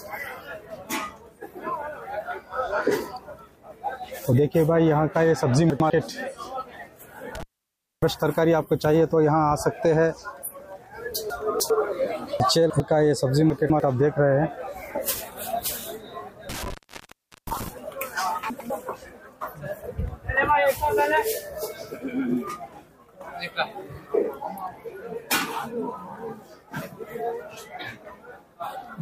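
Chunks out of order at 5.7–5.9 s: a 100 ms block of audio arrived late and played after the block that should follow it. Nothing is lost, but the sound jumps back briefly at the hard joins.

Intermittent contact at 7.35–8.02 s: a loose connection opens for about 0.6 s. The sound drops to faint hiss, with crackle where the contact breaks and remakes.

Chunks out of order again at 11.3–11.7 s, 12.4–12.8 s and 13.5–13.8 s: here the displaced blocks land later, roughly two or three blocks behind. Each passage comes out jumbled.

Intermittent contact again at 16.49–17.68 s: the line opens for about 0.77 s in all. Crackle frames a stretch of near-silent hiss.

Chunks out of order once more at 18.5–18.7 s: a single block plays one position late. This gives a short stutter.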